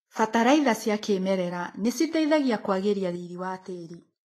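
The speech carries plainly audible Vorbis compression damage throughout. Nothing sounds above 14.2 kHz, and the treble is grainy. This fits a likely bitrate near 30 kbps.

At 3.16 s, just after "cia kĩmerera nĩciteithagia kwagĩria", a sudden gain jump drops the level about 5 dB. Speech and background fall together, likely from a gain change applied without a ramp.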